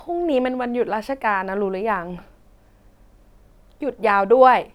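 Listening to the speech recording, nothing technical stood out.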